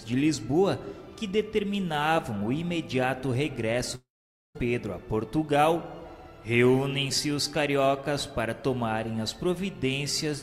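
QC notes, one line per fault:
3.95–4.57 s, long network dropout: the sound trails into a brief fading buzz or hiss, then 0.49 s of silence before audio resumes with 0.6 s lost, likely from packets never arriving. The waveform shows a short decaying tail then a flat gap; the spectrogram goes blank.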